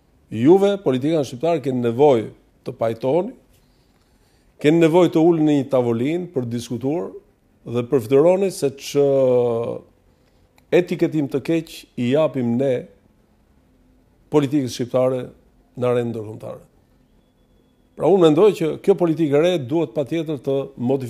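The audio has one sharp click at 6.60 s, likely from dropped samples: about two samples are missing, so the waveform jumps abruptly between non-adjacent values.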